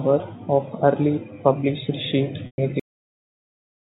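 Speech heard through a G.711 A-law telephone path, with nothing above 4 kHz, shows two faults. The first is packet loss with pitch repetition from 2.46 to 2.58 s. About 120 ms goes missing, which fits six 20 ms packets. The last pitch period is repeated as a brief buzzy hold, fades out over roughly 50 ms, and the speech returns through a short cross-fade, unlike a plain dropout's abrupt hole. The second is a cut-off end at 2.80 s. The audio stops mid-sound and drops straight to digital silence with no decay tail, unlike a natural ending or fade-out, because the final buffers were never played.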